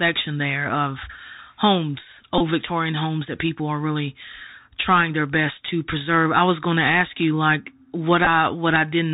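Throughout, the speech carries Bluetooth CVSD headset codec damage that is plainly audible. Nothing passes above 4 kHz, s sounds come out scratchy, a granular hiss sits under the speech, and loud high-frequency content distorts where the adaptive one-bit step size cannot keep pace, consistent with a 64 kbps stream.

From 2.38 to 2.41 s, and again from 8.25 to 8.27 s, a Bluetooth headset packet repeated fault appears as a short buzz near 267 Hz. Lost packets were replaced by re-decoding the previous packet every 3.75 ms. The gaps run about 22.5 ms and 15 ms, which fits six and four packets respectively.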